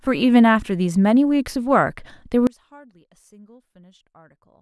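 An audio dropout to a faint residue begins at 2.47 s and runs to the end of the speech. The level falls abruptly rather than fading, and what remains is only a faint leak of the signal, about 25 dB below its earlier level, so the talk seems to vanish mid-flow. The likely cause is a break in the signal feed upstream while the path after the break stayed live and kept passing a weak trace.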